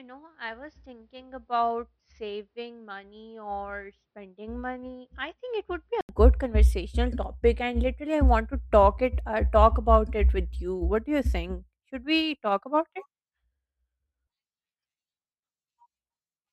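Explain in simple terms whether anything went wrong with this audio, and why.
Input switched to a poorer device, from the start to 6.09 s: the sound is duller and quieter, likely from a lesser microphone, then clears after a brief gap before "conversational topic and literally".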